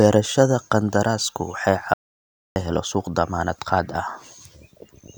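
At 1.94 s, right after "qandaraasku waxay", the speech cuts to an audio dropout to silence lasting about 0.62 s until "la helo" resumes at 2.56 s. The gap is dead silence with no room tone. This likely means the input was briefly lost while silence was recorded. It shows as a flat waveform line and a blank spectrogram column.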